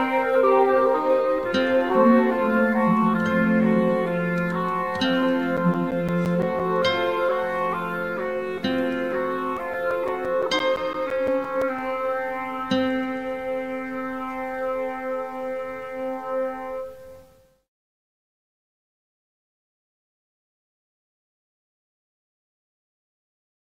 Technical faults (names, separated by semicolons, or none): CD scratch ticks